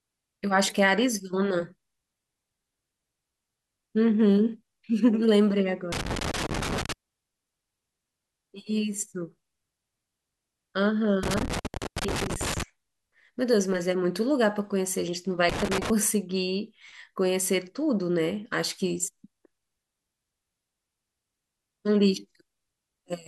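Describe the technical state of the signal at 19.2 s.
At 19.2 s the speech signal is intact, with no audible dropout, clipping, distortion or other technical fault at that moment.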